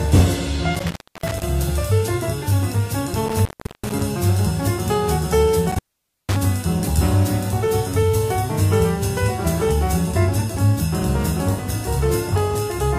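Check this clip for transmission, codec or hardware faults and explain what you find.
There is one hardware fault here, and it happens three times. Intermittent contact occurs from 0.75 to 1.43 s, 3.26 to 4.01 s and 5.72 to 6.36 s. A loose plug or cable conductor briefly loses its connection, so the signal path is physically broken. The sound drops out for about 0.28 s, 0.38 s and 0.50 s, leaving only faint hiss, and each break is framed by crackle as the contact scrapes open and closed.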